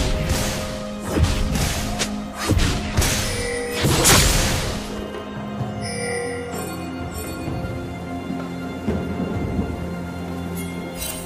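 From 4.09 to 5.22 s the audio carries a 46.9 Hz buzz from a block size mismatch (padded). Short zero-filled gaps pad each block, which fits 1024-sample reads, and the audio is barely slowed (0.999x) at normal pitch.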